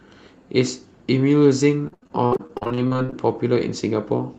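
From 1.87 s to 3.14 s the speech breaks into repeated packet loss, heard as robotic sound: seventeen short holes in quick succession, the longest about 77 ms. Each is patched by stretching the preceding sound, so roughly 40 percent of that span is synthetic fill, giving a choppy texture. Unlike a single dropout or a one-off glitch, the damage recurs densely, with the gaps packed too close for the sound to recover between them. Over the whole clip, the call path's Opus coding trims the top end at about 8 kHz.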